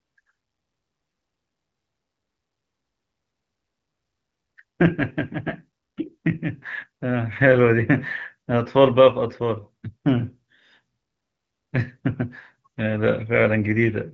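Speech carried over the AMR wideband (HD Voice) codec, at a quality consistent with a rate of about 12.65 kbit/s, with no faults present.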